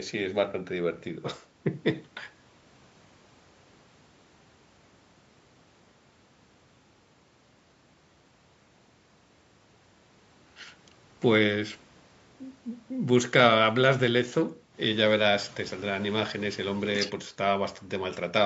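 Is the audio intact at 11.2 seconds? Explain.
Yes, the speech at 11.2 seconds is intact, passing cleanly through the call microphone processing, whose trimming of the lowest bass is normal for that path.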